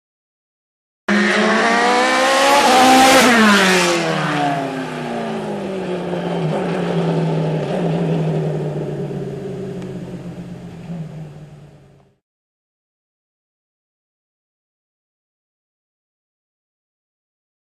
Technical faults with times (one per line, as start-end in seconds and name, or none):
0.00-1.08 cut-off start